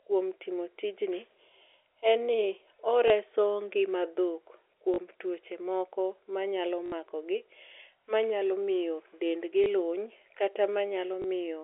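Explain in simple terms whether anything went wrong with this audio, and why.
Speech drops out briefly at 3.08, 4.94, 6.86, 9.64 and 11.22 s. This is packet loss with last packet repeated. The receiver replayed the previous chunk of sound for 20, 40, 60, 20 and 20 ms, which fits 20 ms packets. The result is small blips at 3.08, 9.64 and 11.22 s and short robotic stutters at 4.94 and 6.86 s over the narrow telephone-band G.711 sound.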